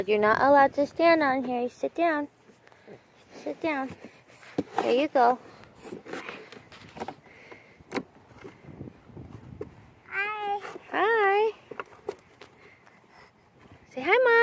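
No faults are audible; the sound carries the expected signature of call microphone processing, with the lowest bass trimmed by its high-pass filter and nothing above 8 kHz.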